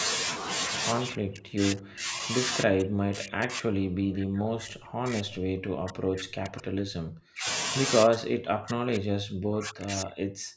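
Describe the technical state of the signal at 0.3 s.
At 0.3 s the signal is intact, with no dropout, distortion or other fault, just the expected band limit of call microphone processing, which leaves nothing above 8 kHz.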